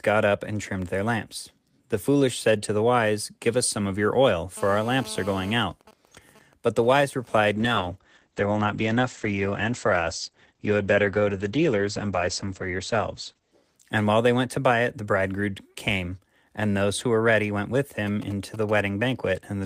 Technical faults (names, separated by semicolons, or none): GSM phone buzz; GSM signalling bursts; call bitrate drop